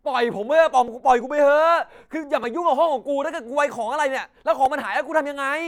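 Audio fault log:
0.88 s, 2.44 s and 4.66 s, repeated buffer: at each point the speech stalls for an instant while the same tiny slice of audio, about 1.33 ms long (which fits a 64-sample buffer), plays again, once at the first two times and three extra times at 4.66 s. Because the slice is so short, each repeat sounds like a click or a very brief buzz rather than a stutter. Unlike a dropout, there is no silent gap and nothing seems to go missing.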